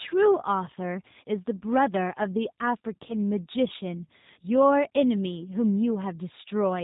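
From start to finish the speech carries plainly audible G.729 codec damage, a sound consistent with the 8 kbit/s G.729A variant. Each 10 ms frame is rebuilt from a vocal tract filter, a pitch predictor and a handful of pulses. Nothing above 4 kHz survives, and the voice comes out slightly rough and synthetic.

VoIP packet loss concealed by the speech codec appears at 3.08 s, where a single 10 ms frame goes missing. The decoder extends the previous pitch and filter with falling gain, so a brief fading smear replaces the sound. The recovery lingers as a weakened, distorted stretch until about 3.15 s.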